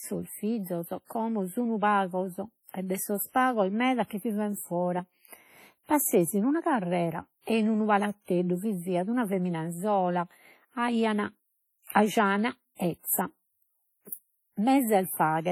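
Throughout the speech, the sound rings and smears, with a washy hiss that swells and fades alongside the signal, most likely from WMA compression at a low bitrate around 32 kbps. A spectrogram would show blurred transients and gappy, zeroed weak components.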